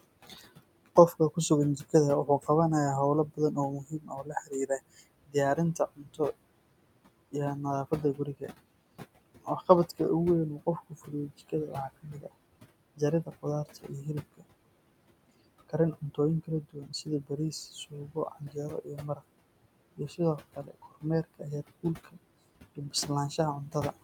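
A noise suppressor runs throughout, pulling steady background it judges to be noise down by about 21 dB, frame by frame. The room noise, about 16 dB below the speech, sinks in pauses and returns under talking.

The same noise suppressor cuts the speech itself in eight stretches: 0.03–2.49 s, 3.29–6.2 s, 7.91–10.0 s, 10.58–12.32 s, 12.96–14.43 s, 15.68–19.22 s, 19.97–22.17 s and 22.76–24.03 s. It dips softer parts by about 18 to 22 dB, so consonants and word endings sound swallowed. The losses total roughly a second and a half within 15.68–19.22 s, and less elsewhere.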